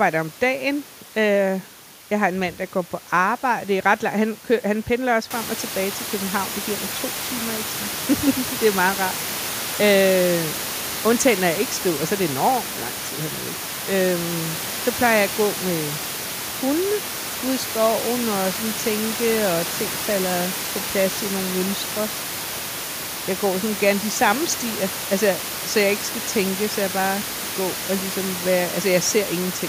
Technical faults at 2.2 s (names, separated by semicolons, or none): none